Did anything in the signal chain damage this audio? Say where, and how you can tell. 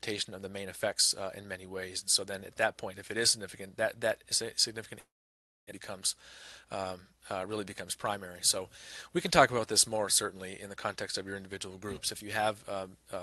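Yes, at the network stage, most likely a long network dropout. From 4.99 s to 5.73 s the sound stops: the receiver briefly stretches the last fragment into a decaying buzz, then about 0.62 s of near-silence follows. When audio resumes, roughly 0.6 s of material is missing, not delayed, and timing shifts by roughly 70 ms as the jitter buffer resettles. The call codec limits the band to about 12 kHz throughout.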